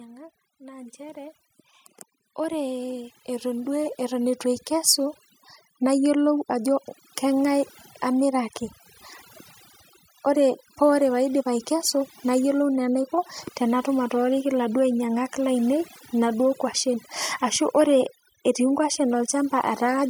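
Overdone noise removal runs throughout: the noise reduction is set too strong and strips out frequency bands near its noise estimate, leaving speech over near-silent, twinkling background. From 2.21 to 5.25 s, automatic gain rising occurs: the gain control judges the input too quiet and lifts it by about 11 dB, so speech and background swell together.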